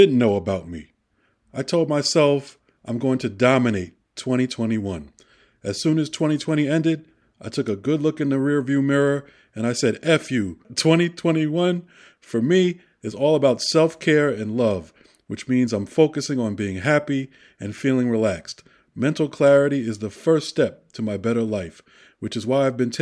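No technical faults can be heard anywhere in the recording.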